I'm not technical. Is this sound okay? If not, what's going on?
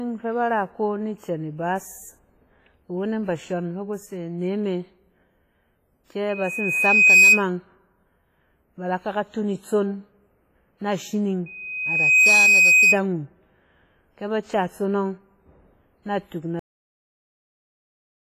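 No. There are three separate problems.

The whole clip carries heavy codec damage, most likely from WMA compression. This kind of encoder stores sound in long overlapping blocks and throws away detail it judges less important. Here that leaves the speech sounding washy and ringing, with a hiss that rises and falls along with the talking. Nothing is left above about 15 kHz, so the top sparkle is missing too.

At 6.29 to 7.44 s and again at 11.46 to 12.99 s there is a loudspeaker feedback squeal. A microphone was picking up the speaker it was feeding, and one pitch, around 2.5 kHz, kept going round the loop and growing. Each time it swells up over roughly a second in the first case and a bit under a second in the second, then sits well above the speech. The first squeal is the louder of the two.

At 16.59 s there is a cut-off end. The speech stops mid-sound with no natural fade, and the last couple of seconds are just silence. 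The final part of the recording was never written out, so the audio simply ends where the saved data runs out.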